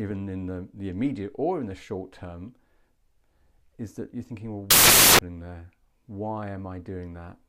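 At 4.71 s the reader starts assembling each sample from the wrong bytes, so the rapidly changing low-order bits land in the high-order positions. Until 5.19 s the speech is replaced by loud, harsh broadband noise.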